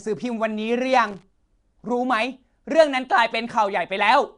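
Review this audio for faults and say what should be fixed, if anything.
Throughout, a rough hissy halo and smeared, underwater quality, with nothing above 10.6 kHz, likely Nellymoser compression near 44 kbps; noise-filled bands distinguish it from plain low-pass filtering. Record or transcode with a modern codec at adequate bitrate instead.

From 1.05 to 1.23 s, irregular scratchy bursts chop the speech: loose connector crackle, a contact making and breaking; its irregularity separates it from periodic dropouts. Clean and reseat connectors, replacing worn cables before recording.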